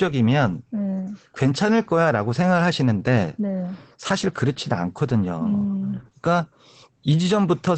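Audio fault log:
throughout, Opus voice compression: the speech is muffled, hoarse and faintly robotic, with nothing above about 8.5 kHz. That points to Opus in its SILK linear-prediction mode at wideband, at a bitrate around 12 kbps. It codes the voice as a predicted spectral envelope plus a coarsely quantised excitation, which roughens the voicing. A plain low-pass filter would dull the top without adding this grain, and a harder bitrate squeeze would narrow the band further toward 4 kHz.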